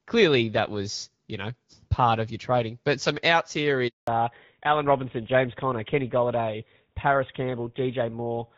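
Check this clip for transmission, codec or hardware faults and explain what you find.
Two faults are audible: a handover gap followed by a fallback to narrowband for the rest of the call.

At 3.88 s, just after "some outs here", the speech cuts out for 200 ms. This is a handover gap: while the call moved between networks, no speech frames arrived, so the signal decays quickly to silence. On the waveform it shows as a flat, empty stretch until the new link resumes at 4.08 s.

From 4.08 s to the end, the call falls back to narrowband. Before the switch, the HD Voice coding sounds light and clear, consistent with AMR-WB at around 12.65 kbit/s. Afterwards, the rougher, duller speech points to an older codec such as GSM full rate. On a spectrogram, all energy above 4 kHz disappears, leaving a hard ceiling.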